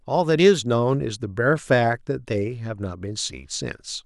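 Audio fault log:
Nothing stood out on listening to this speech recording.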